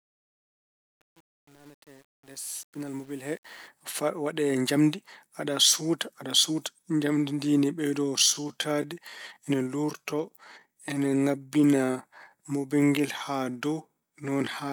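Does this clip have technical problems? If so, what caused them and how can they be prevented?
Yes. From 0.0 to 3.68 s, the fade-in at the start suffers truncation distortion. The gain stage handling the fade kept too few bits and added no dither, which fits an 8-bit stage. While the level sits near the smallest step, the waveform collapses into a few coarse square steps. The fade's level rises smoothly, but the quiet part through about 3.43 s sounds gritty. Prevent it by processing fades at high bit depth and dithering when reducing word length.

From 8.02 s to the end, including "pinal ngal", there is a time-stretched section. Software likely stretched this stretch to fill a longer duration, holding the pitch steady by repeating short slices of the audio. Playback runs at about 0.73 of the original pace, so delivery abruptly slows and drags while the pitch stays the same. Prevent it by editing for length with cuts rather than stretching, or by keeping any stretch very small.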